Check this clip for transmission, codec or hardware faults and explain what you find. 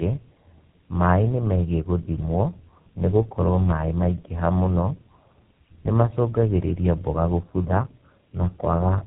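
The speech sounds rough, muffled and warbly throughout, with nothing above about 3.8 kHz. That points to tandem speech coding: the call was decoded and re-encoded at each link, likely through three low-rate codecs such as GSM full rate and iLBC, each adding its own damage.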